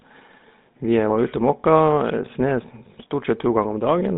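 From start to end the speech carries GSM full-rate codec damage, plainly audible throughout. The vocal tract is modelled and excited by a regular pulse train that keeps only a third of the excitation samples, leaving a buzzy, gravelly grain on every voiced sound. The line passes roughly 150 Hz to 3.7 kHz, so the top end is gone and the low end is thin. The coarseness fits the 13 kbps GSM full-rate coder.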